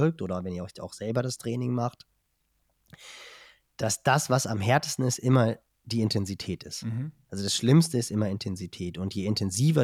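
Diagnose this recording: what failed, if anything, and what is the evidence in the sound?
Nothing in this speech recording points to a failure anywhere along the chain, so there's no stage to diagnose and nothing here calls for a fix.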